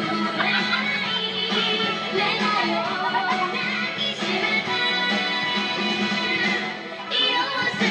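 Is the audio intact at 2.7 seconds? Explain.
Yes, the audio at 2.7 seconds is intact, with no dropout, click, distortion or other fault at that point.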